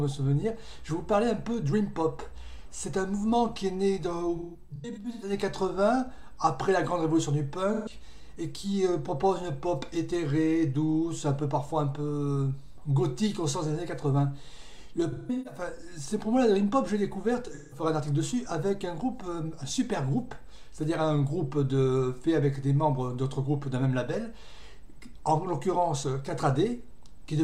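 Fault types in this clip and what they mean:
AAC frame loss with concealment: coded frames went missing and the decoder filled each gap from the last good spectrum, so four patches, near 4.4, 7.7, 15.1 and 17.5 s, turn smeared, noisy or phasey, the longest runs in the first and third lasting about 150 ms and the last a single run of about 171 ms.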